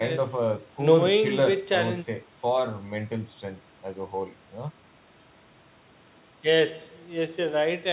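No technical faults are audible.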